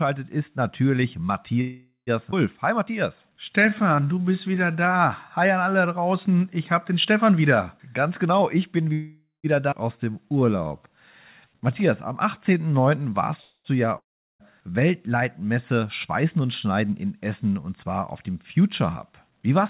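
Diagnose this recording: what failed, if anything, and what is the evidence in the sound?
Call audio freeze at 1.61–2.10 s, 8.93–9.47 s and 13.42–13.68 s, in the network and jitter-buffer stage. Each time the last sound is stretched into a fading buzz that ends in silence (about 0.13 s, 0.18 s and 0.08 s of it). The audio then resumes exactly where it stopped, with nothing lost, just delayed by about 0.46 s, 0.51 s and 0.23 s. This is likely late packets draining the jitter buffer while concealment filled the wait.

Skip ahead at 2.31–2.35 s and 9.71–9.75 s, in the network or jitter buffer. Playback leaps forward, losing around a fifth of a second at the first jump and about half a second at the second. The two sides are spliced with only a tiny join. A stretch of audio was dropped while later audio was already waiting, sacrificing content rather than time.

Jitter buffer slow-down at 2.76–4.90 s and 9.97–13.10 s, in call processing. 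Both stretches play at about 90% speed with unchanged pitch, gaining 221 ms and 308 ms respectively. Sounds come out drawn-out. The receiver was rebuilding its reserve by repeating individual pitch periods and pause fragments over and over, which lengthens the audio without shifting its frequency.

Jitter buffer speed-up at 7.77–8.92 s and 15.72–16.41 s, in call processing. The first runs at about 116% and sounds hurried, with roughly a fifth of a second cut. The second is milder, near 106%, trimming around 50 ms. Pitch stays put because the receiver snipped out short runs of whole pitch periods repeatedly. It did this to pull an overfull buffer back to its target delay.

Long network dropout at 13.98–14.43 s, on the network. The last sound decays into a brief buzz, then roughly 0.37 s of silence follows. When audio returns it has jumped ahead, with about 0.42 s permanently gone. The cause is likely a long run of packets that never arrived, too long for concealment to bridge. 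Throughout, the call path band-limits everything to below 4 kHz, consistent with a 64 kbps G.711 A-law codec.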